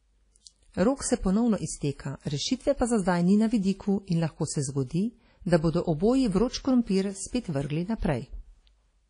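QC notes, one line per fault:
Throughout: WMA compression, likely. The speech rings and smears, with a washy hiss that rises and falls with the signal and nothing above 10.1 kHz. Long transform blocks spread quantisation noise over tens of milliseconds and zero weak lines, which fits a bitrate near 32 kbps.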